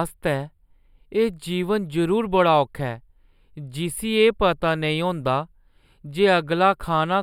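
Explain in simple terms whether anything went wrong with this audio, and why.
Channel delay (comb filtering) runs through the whole speech clip, from start to finish. One side of the recording arrives a tiny fraction of a millisecond later than the other, which fits a lag of just a few samples. When the two sides are mixed into one, parts of the sound cancel each other at regularly spaced pitches, starting high up around 7 kHz. That takes the sparkle off the top end, so the speech sounds dull and hollow throughout.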